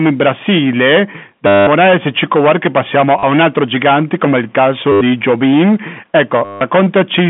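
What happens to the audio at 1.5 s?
Right there you're in a dropout: from 1.47 to 1.67 s, 200 ms of audio went missing and the receiver just kept replaying the last packet it had. The result is a short robotic stutter with a buzz around 100 Hz, which fits 10 ms packets.

On top of that, the hard clipping that runs through the whole clip is still there. The signal is driven about 15 dB past what the chain can pass, so a fair share of the samples, somewhere around 15 percent, get flattened. That gives a harsh fuzz on anything loud, and it sits over the narrow telephone band of the G.711 line.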